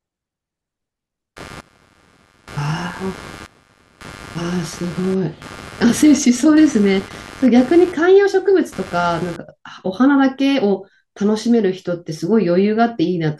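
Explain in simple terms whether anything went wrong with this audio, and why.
Computer activity noise runs from about 1.36 s to 9.36 s: a buzzy, chirping texture pulsing roughly a hundred times a second, sitting quietly underneath the speech. It isn't part of the recording itself. When the computer's processor, graphics card or mouse suddenly works harder, the changing current disturbs the electrical ground that the audio circuit shares, and that disturbance leaks into the sound. That is why the buzz follows the machine's activity rather than the talking.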